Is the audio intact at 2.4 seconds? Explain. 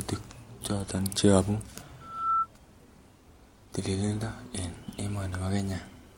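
No. A loudspeaker feedback squeal runs from 2.01 to 2.47 s, so 2.4 s falls near its end. A microphone was picking up the loudspeaker it fed, and at 1.3 kHz the gain around that loop exceeded one, so the tone kept reinforcing itself. It swells over roughly a third of a second into a steady, piercing squeal that sits about 5 dB above the speech.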